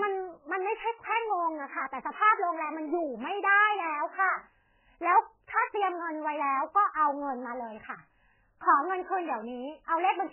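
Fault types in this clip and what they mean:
MP3 compression: the speech is muffled and watery all the way through, with nothing above about 3.1 kHz. That's likely heavy MP3 coding, fitting a bitrate near 8 kbps, where the encoder chops off the treble and lets weak frequency lines flicker between frames.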